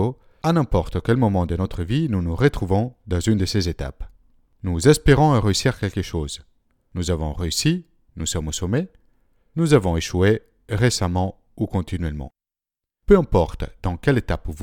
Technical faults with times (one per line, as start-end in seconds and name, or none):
none